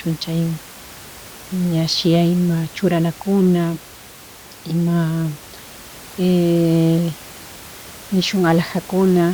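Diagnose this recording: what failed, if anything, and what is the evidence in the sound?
Nothing in the chain has failed: the speech signal is continuous and undistorted, with only the room's own background noise sitting about 21 dB below it as part of the recording.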